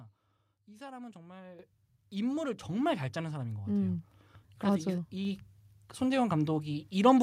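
At 1.59 s the microphone volume steps up by about 10 dB, and at 2.61 s it steps up again by about 4 dB. Automatic gain control judged the input too quiet and raised the device's input volume in single jumps, so the speech and the room noise beneath it get louder together. On the waveform the envelope widens abruptly at each point; on a spectrogram every band, including the noise floor, brightens at once.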